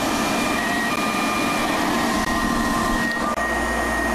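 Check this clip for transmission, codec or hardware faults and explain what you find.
Three short dropouts land at 0.96 s, 2.25 s and from 3.34 to 3.37 s. Each sounds like a sharp tick or a tiny hole. These are blocks of digital silence, where samples were zeroed with no fade. The 11.6 ms and 23.2 ms gaps fit 512- and 1024-sample buffers that were not filled in time.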